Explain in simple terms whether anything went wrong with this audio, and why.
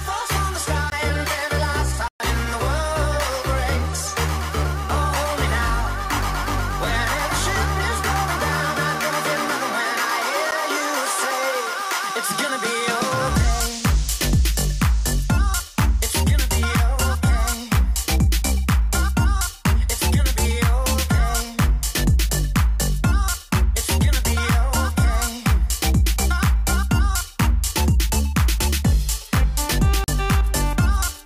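Four times the sound drops out abruptly and returns: at 0.90 to 0.92 s, 2.08 to 2.20 s (a 120 ms hole), 10.51 s, and 30.04 to 30.08 s. Each is a block of digital silence, where samples became zeros, likely because the program didn't fill its output buffer in time.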